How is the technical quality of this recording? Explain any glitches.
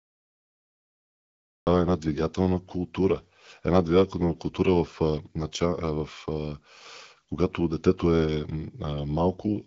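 There is one glitch, a cut-off start, heard through band-limited HD Voice audio that stops near 7.6 kHz. Capture began late, so 0 to 1.67 s is flat digital silence. Speech then enters mid-sound at 1.67 s, appearing as an abrupt vertical waveform edge with no attack.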